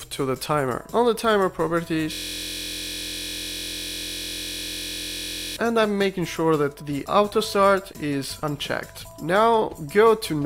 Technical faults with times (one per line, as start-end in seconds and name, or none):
2.13-5.56 system hang loop